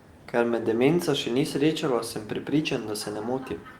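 No technical faults are audible in this speech.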